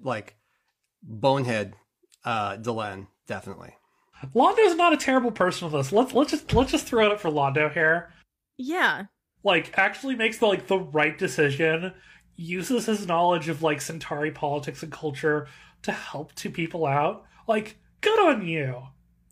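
No technical faults can be heard anywhere in the recording.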